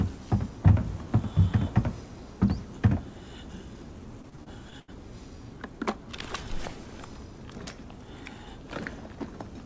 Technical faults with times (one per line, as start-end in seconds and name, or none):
4.22-4.90 repeated packet loss (robotic sound)